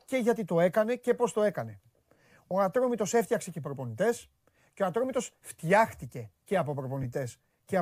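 A speech clip with two brief dropouts from lost LE Audio frames, at 2.50 s and 7.03 s, just after "φτιάχτηκε και από". Each is a short noisy smear where the decoder repeated the previous spectrum with scrambled phase. The gaps fit about 20 ms and 10 ms of missing audio. The light LC3 compression audible throughout is likely from a Bluetooth link.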